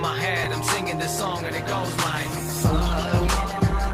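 At 0.44 to 0.46 s there is a brief jumbled flicker: chunks out of order. A chunk of about 11 ms arrived one chunk late and played after its successor, leaving three hard joins. Unlike a dropout, nothing goes missing; the sound is only reordered.

From 1.20 s to the end, the audio switches to an adaptive stream at a lower bitrate. Codec artefacts rise, consistent with Opus falling from about 64 to 16 kbit/s. Unlike packet loss, there is no gap, just a sudden, sustained drop in quality.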